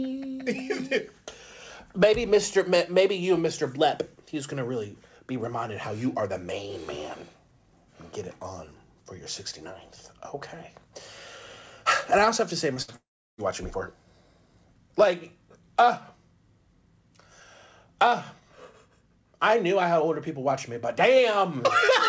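At 12.74 to 12.78 s a short concealed packet loss fills 20 ms with continued sound, a brief smear rather than a gap, unlike the longer losses that follow. From 12.82 to 12.90 s a burst of packet loss replaces 60 ms with a held, fading extension before the audio resumes further on, longer than a single smear. From 12.96 to 13.40 s a long network dropout is the likely cause of 420 ms going missing. The fill fades after a moment and leaves about 340 ms of silence, which distinguishes it from a burst that never goes quiet. Throughout, nothing is heard above 8 kHz, which fits the G.722 call codec.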